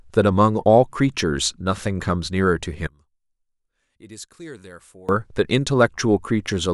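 One channel inverted, from 2.87 to 5.09 s: the speech abruptly drops by about 25 dB, collapsing to a faint residue before returning at full level. The likely cause is reversed polarity on one stereo channel. When the two channels are combined, everything they share, including the centred speech, cancels against its own mirror image, so only the small differences between left and right remain audible for that stretch.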